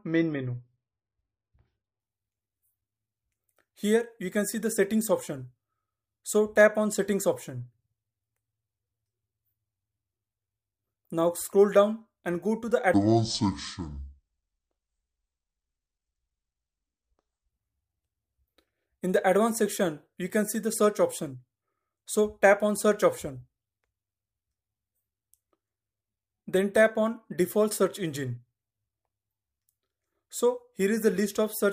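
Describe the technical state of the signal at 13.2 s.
The sound at 13.2 s is dragged low and slow, sitting roughly ten semitones down. It falls within a section at the wrong speed, from 12.94 to 17.49 s, running at 0.556 times normal speed. Pitch and tempo drop together, which points to a likely playback or editing clock mismatch.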